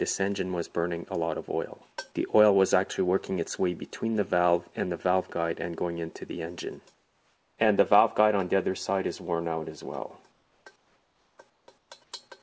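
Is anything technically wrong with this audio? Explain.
Yes. Comfort noise replaces the background at 6.94–7.58, 10.32–10.66, 10.76–11.38, 11.50–11.68, 11.78–11.90 and 12.04–12.12 s. The sender likely paused transmission during these quiet gaps, and the receiver filled them with synthetic noise. The real background turns into a flat, featureless hiss about 3 to 8 dB quieter, audible through a band that stops at 8 kHz, which fits G.722 at 64 kbps.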